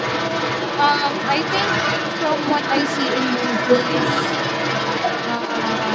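In this speech clip a second voice runs underneath the main talker from start to finish, roughly as loud as the speech itself. This is the other side's voice leaking through, likely because the device's echo canceller failed to remove loudspeaker playback from the microphone signal.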